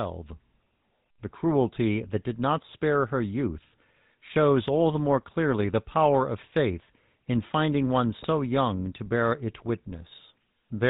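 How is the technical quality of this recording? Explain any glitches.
The recording is plainly degraded by a telephone codec throughout, with one short burst of corruption near the end.

GSM full-rate codec, throughout: the sound has the narrow, buzzy, gravelly texture of the original GSM full-rate coder, consistent with its 13 kbps rate. That coder rebuilds the vocal tract as a filter excited by evenly spaced pulses, keeping only a third of the excitation detail. The damage is plainly audible as rasp and grit, and nothing reaches above 4 kHz.

GSM bit errors, 8.18 to 8.27 s: between "faith in finding one" and "young to bear it" there is a brief squawking, gargling break lasting about 84 ms, which fits roughly four 20 ms frames being hit. Corrupted bits reached the decoder, so the filter, pitch or gain values it used were wrong. This distorts the spectrum and the level in those frames, and the sound lurches into garbled noise before recovering.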